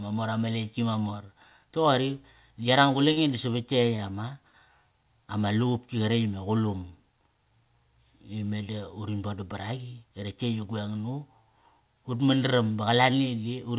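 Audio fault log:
3.12–3.20 s, 3.97–4.01 s and 4.50–4.57 s, short stall from a late packet: each time a packet arrived late and the jitter buffer ran dry, so the receiver held the last sound for about 46, 19 and 32 ms, then resumed without losing anything. On a spectrogram the harmonics run flat and smeared for those spans; the waveform shows a repeated, slightly buzzy cycle before normal movement returns.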